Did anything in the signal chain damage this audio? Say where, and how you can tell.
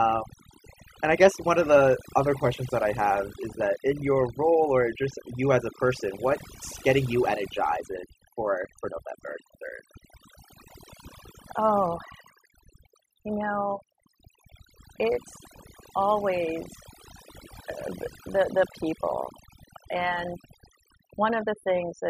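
Yes. Overdone noise removal at the call-processing stage damages the whole clip. Between phrases the background drops to near silence with twinkling specks. An over-strong suppressor is cutting frequency bands near its noise estimate, taking quiet speech detail with them.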